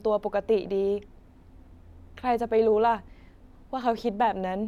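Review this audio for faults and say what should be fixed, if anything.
No faults turn up in this audio, so nothing needs to be fixed.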